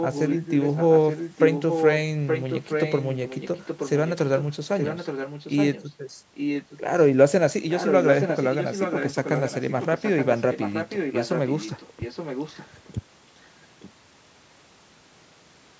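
Speech with an echo leak. A delayed copy of the speech trails it by about 0.87 s at 0–1.99, 2.26–3.9, 4.06–4.13, 4.37–4.56, 4.73–5.85, 6.34–6.81, 7.68–12.94 and 13.8–13.91 s. It is mostly only a little quieter than the speech, and weak in the brief scraps near 4.1 and 13.9 s. The likely cause is a loudspeaker echo canceller on the other end that failed to remove what its microphone picked up.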